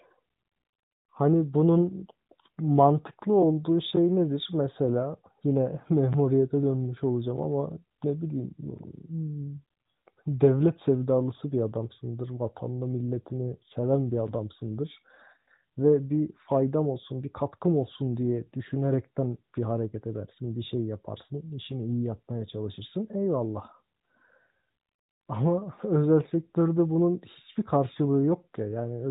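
No technical faults can be heard in this speech recording. It comes through the AMR narrowband mobile codec with nothing above 4 kHz and only light coding character, which fits the 12.2 kbps top mode.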